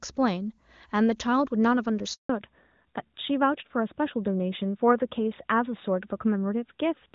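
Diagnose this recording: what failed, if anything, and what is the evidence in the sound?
Network stage: a handover gap at 2.13 s. While the call was passed from one network to another, no speech frames were delivered. The speech dies away within a few tens of milliseconds and stays silent for 160 ms, until 2.29 s. That stretch is lost.

Codec stage: a fallback to narrowband from 2.29 s to the end. The call dropped to an older narrowband codec instead of HD Voice, so nothing above 4 kHz remains. Against the clean wideband sound before the gap, which fits AMR-WB at 23.85 kbit/s, the speech turns duller and rougher, consistent with AMR-NB at 12.2 kbit/s.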